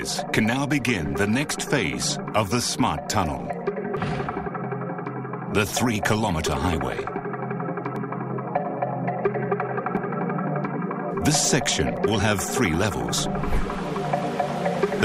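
From about 1.98 s to 13.96 s the audio carries periodic USB or driver dropouts: a small tick recurs every 2.0 s, around seven times in all. Each time, something stalls the USB transfer or the audio driver briefly and roughly a millisecond of samples is skipped outright rather than filled with silence. The waveform jumps across the gap, so the clicks are heard only where signal is present.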